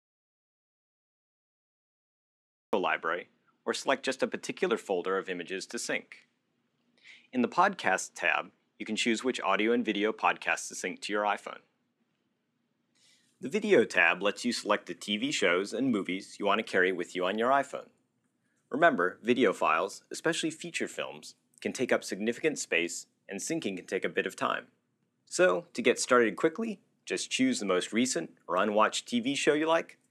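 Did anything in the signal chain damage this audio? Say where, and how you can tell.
Yes. There is an audio dropout to silence at the very start. The clip opens in silence, and the sound only enters at 2.73 s. That gap holds no room tone, so it is dead signal rather than a quiet passage. Whatever happened during that time is gone. The likely cause is a loss of input ahead of the recorder or encoder, through a disconnected device, a failed link or a stray mute, while writing carried on.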